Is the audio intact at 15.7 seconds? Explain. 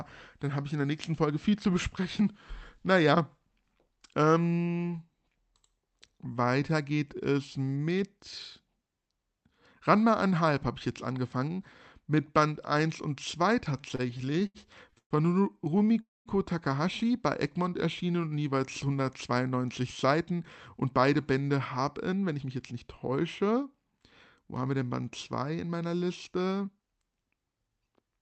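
No. From 15.65 to 15.98 s there are repeated stalls (stutter): the jitter buffer ran dry five times, briefly stretching the last sound, so the audio drags rather than dropping out.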